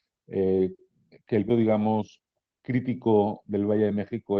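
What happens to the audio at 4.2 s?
At 4.2 s the speech comes through intact, with no dropout, click or distortion at that moment.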